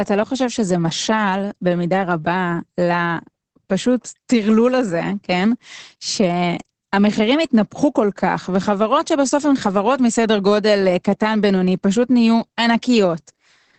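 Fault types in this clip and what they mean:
Opus voice compression: a low-rate linear-prediction voice coder throughout, which fits about 10 kbps; nothing above 8.7 kHz, and the speech sounds muffled, hoarse and slightly robotic.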